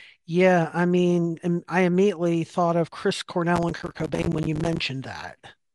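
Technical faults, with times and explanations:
3.56–4.81 s: processor overload crackle. Dozens of tiny silent gaps break the speech, each sized to suggest missed buffers of about 5 ms. Their hard edges fuse into gritty crackle.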